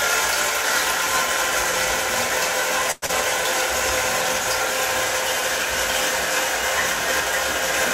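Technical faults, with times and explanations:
2.91 to 3.04 s, call audio freeze. The sound stalls for about 0.11 s. The last moment before the stall is stretched into a short buzzy or hissy tail that fades. There is no true silence. The audio then resumes from exactly where it left off, so nothing is lost. It simply arrives late. The likely cause is packets held up in transit, which left the jitter buffer empty until they arrived.
3.06 to 3.11 s, short concealed packet loss. Right after the stall, a brief smear replaces the real audio. The receiver never got a stretch of sound in time, about 60 ms of it. It bridged the hole with about 25 ms of synthesised continuation, then blended back in. The missing sound is skipped rather than delayed. That cuts the timing back by roughly 40 ms and pulls it back toward the original pace.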